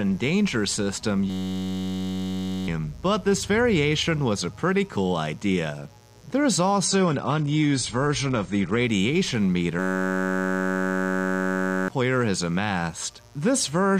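Mains buzz runs through the whole recording: a steady, raspy buzz roughly 30 dB below the signal, built on 60 Hz. Sharp switching spikes from a dimmer, rectifier or poorly shielded lead arrive twice per mains cycle, and their harmonics stack up far above the fundamental to give that coarse edge rather than a smooth hum. A system hang loop strikes from 1.30 to 2.68 s and again from 9.79 to 11.88 s. Each time the audio locks onto a single 10.67 ms fragment repeated over and over, turning into a steady buzz at 93.8 Hz, which fits a 512-sample buffer. The playback software or driver stalled while the hardware kept cycling that same buffer, so about one and a half seconds of real audio is lost in the first event and about two seconds in the second. The adaptive stream at a lower bitrate appears from 6.84 to 8.84 s, where the quality drops abruptly with no gap. Everything above 9.5 kHz vanishes and compression artefacts thicken, which points to a switch from roughly 96 to 32 kbit/s AAC as the connection slowed. 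The full quality returns just as suddenly at the end of that stretch.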